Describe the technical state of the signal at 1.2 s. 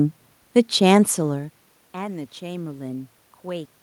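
At 1.2 s the signal is intact, with no technical fault; the only background sound is ordinary room noise picked up by the microphone.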